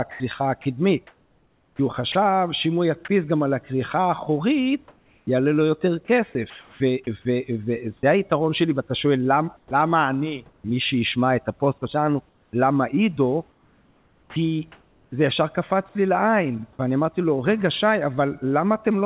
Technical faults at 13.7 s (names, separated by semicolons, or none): comfort noise in place of the background